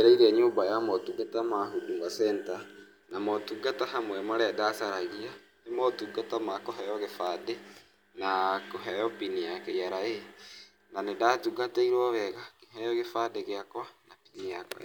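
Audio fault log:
No faults heard anywhere in the speech.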